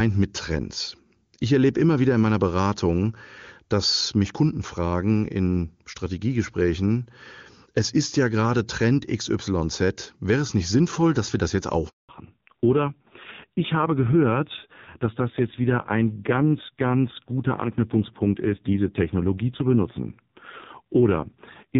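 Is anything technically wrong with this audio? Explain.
Yes, there are two related faults, both in the second half of the call.

Handover gap, 11.89 to 12.09 s, right after "dass wir das jetzt": the speech cuts off for 200 ms. During a network switch the phone received no speech frames, so the decoder had nothing to play. The sound dies away within a few tens of milliseconds, then there is dead silence until the new link delivers audio. Whatever was said in that window is gone.

Fallback to narrowband, from 12.09 s to the end: after the handover the call is no longer carried by the AMR wideband (HD Voice) codec, which before the switch sounds clean and fits a high-rate mode. It has been renegotiated to a narrowband AMR codec. Nothing above 4 kHz remains, so sibilants and consonant detail lose their top end and the speech turns muffled and dull. There is also a rough, buzzy texture, which fits a low-rate narrowband mode.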